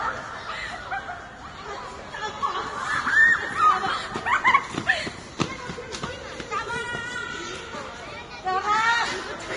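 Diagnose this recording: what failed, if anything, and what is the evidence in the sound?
Vorbis compression damage runs throughout the recording, from start to finish, and points to the codec stage. Nothing is heard above about 10.6 kHz, so the top octave is simply gone, and the remaining treble is hissy and grainy, with tones roughened and attacks smeared. The likely cause is a heavily squeezed Vorbis encode, consistent with a bitrate around 30 kbps, where the encoder lowers its cut-off and quantises the residue so coarsely that fine high-frequency detail turns into noise.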